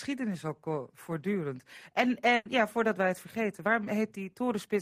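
A burst of packet loss at 2.35 to 2.47 s left about 100 ms missing; the receiver stretched and faded the last sound before "ja voordat wij het".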